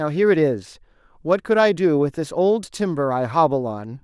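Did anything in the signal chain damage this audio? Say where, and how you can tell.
No, nothing along the chain from capture to playback has left a mark I can hear on this bit of speech.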